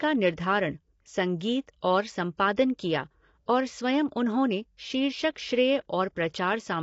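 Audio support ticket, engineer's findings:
Speech rough and grainy throughout, noise between harmonics, nothing above 7.8 kHz; likely low-delay AAC compression (AAC-ELD), short frames, fits a 24 kbps stream.

Short hiss ahead of a sharp attack at 2.37 s, attack softened; pre-echo, block quantisation noise spread about 16 ms before the onset.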